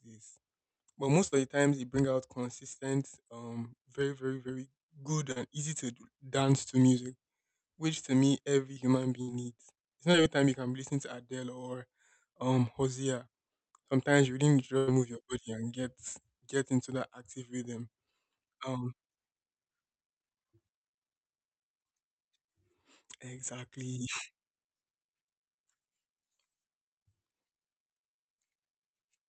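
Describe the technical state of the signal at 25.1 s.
At 25.1 s the audio is intact, with no fault present at that moment.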